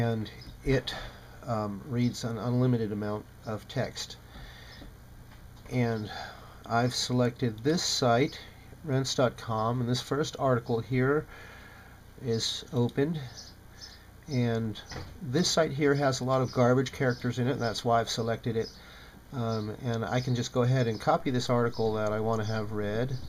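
At 21.20 s a DC step occurs: the waveform's zero line jumps to a new resting level, an offset of about −40 dBFS, and stays there until the end of the clip. The sudden shift is heard as a single low thump or click at the moment of the jump, while the sound carries on unchanged. Unlike a dropout or glitch, nothing is missing or distorted afterwards; only the baseline has moved, and it never returns.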